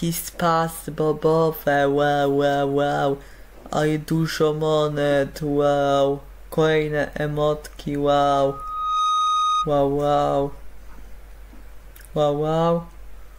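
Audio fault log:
8.41–9.73 s: loudspeaker feedback squeal, a 1.2 kHz tone swelling over roughly 0.7 s to about signal level, as the microphone re-amplifies its own loudspeaker output.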